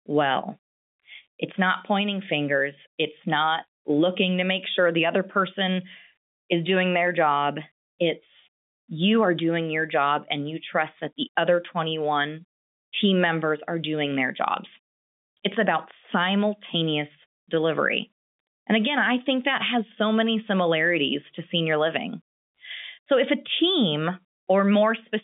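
Nothing goes wrong anywhere in this one; it's ordinary telephone speech carried over G.711, so everything sits in the usual phone band of about 150 Hz to 3.6 kHz with nothing above about 3.7 kHz, which is simply how a phone line sounds.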